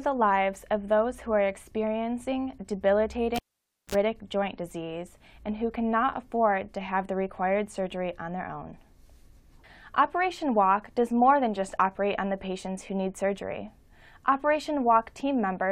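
At 3.36 s the cable is pulled and plugged in again while the signal is live. A pop marks the break, then about 0.54 s of near silence while the circuit is open. As the plug goes back, only its tip makes contact at first, giving a 51 ms burst of 60 Hz mains buzz before a second pop and the sound's return at 3.95 s. That buzz and the paired pops set it apart from a plain digital dropout.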